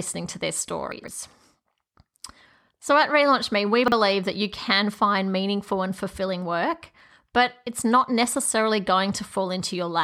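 Right after "to their", at 0.92 to 1.08 s, there's a case of chunks out of order. A 40 ms chunk turns up three chunks late, so the speech jumbles briefly. The same thing happens at 3.84 to 3.92 s, just before "that you can find", where a chunk arrives one chunk late.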